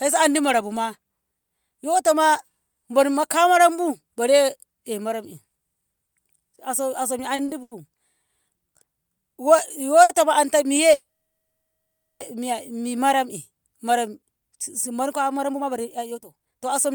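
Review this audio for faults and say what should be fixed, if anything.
Short stalls from late packets occur at 7.35–7.40 s, 7.46–7.50 s, 7.62–7.73 s and 10.03–10.11 s, adding 30, 20, 90 and 60 ms. Each time the jitter buffer ran dry and the receiver held the last sound until the packet arrived. A spectrogram shows briefly frozen, smeared harmonics. Prevent this with a slightly deeper adaptive jitter buffer.

A call audio freeze runs from 10.93 to 12.22 s, inserting about 1.27 s, of which about 1.16 s is silence. The likely cause is delayed packets emptying the buffer. The last sound buzzes, fades to a flat waveform, then resumes unchanged. Better network prioritisation would prevent it.

A jitter buffer speed-up from 15.35 s to 16.94 s plays the speech at 129% with pitch unchanged, trimming roughly half a second of pitch periods after the backlog. The waveform shows compressed syllables with shortened gaps. 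Draining the buffer more gradually would prevent it.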